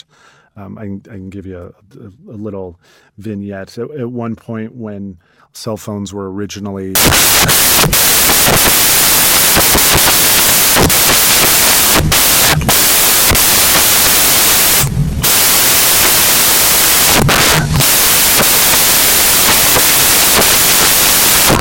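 From 6.95 s to the end at 21.61 s, the speech turns into loud, harsh broadband noise: samples built from the wrong bytes. The decoder misassembles each sample, whether through a one-byte offset, swapped byte order or wrong alignment, so the rapidly changing low bits dominate. Clipping only distorts the loudest moments, but here the noise, near white on loud sounds, never recovers.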